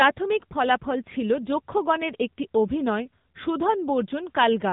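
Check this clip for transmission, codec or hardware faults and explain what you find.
One codec fault runs through the whole speech clip. AMR narrowband mobile codec damage is present throughout. The audio is squeezed into an 8 kHz mobile speech model with nothing above 3.8 kHz, so sibilants go dull. The plainly audible buzzy, synthetic voicing fits the AMR-NB mode at around 8 kbps.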